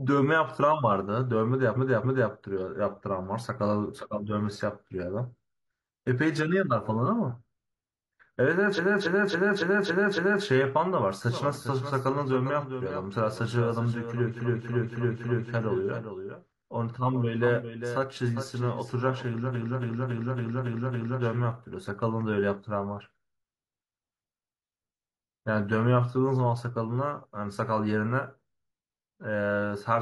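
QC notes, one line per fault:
1.72–2.28 s, 8.73–10.41 s, 14.35–15.47 s, 19.51–21.18 s, repeated frames: the same 0.28 s block of compressed frames (likely six frames) was delivered again and again, replayed 2, 6, 4 and 6 extra times. The sound stutters and runs 0.56, 1.67, 1.11 and 1.67 s longer.
11.31–21.52 s, doubled audio track: a second copy of the speech, likely from a slower capture path, is mixed in around 0.4 s late and about 10 dB quieter. It gives a dry, full-band echo with no room decay that cuts in and out abruptly.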